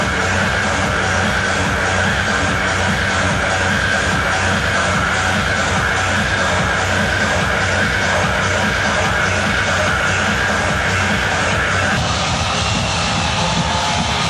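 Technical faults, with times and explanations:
No technical faults are audible anywhere here.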